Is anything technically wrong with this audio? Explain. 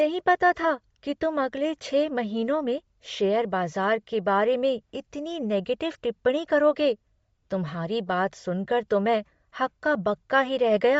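Yes. Throughout the speech, the upper frequencies sound breathy and grainy, with a hissy, synthetic sheen. This is likely Bluetooth LC3 compression at a low bitrate, consistent with 32 kbps in 10 ms frames, where the codec discards high-frequency detail and substitutes filled-in noise.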